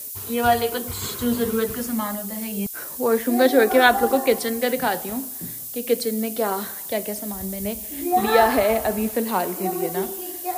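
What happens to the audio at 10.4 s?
At 10.4 s you're hearing the same low bit depth with noise shaping that runs through the whole clip. With only 6 bits, the rounding error gets pushed up the spectrum, so a thin, steady hiss climbs toward the top, nearly as loud as the sound itself.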